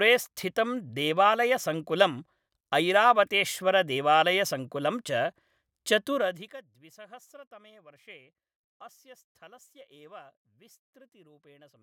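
Zipper noise at 6.12 to 6.61 s: a roughly 25 dB drop made in unsmoothed 1 dB steps, about fifty a second, ticks audibly where a smooth fade stays clean.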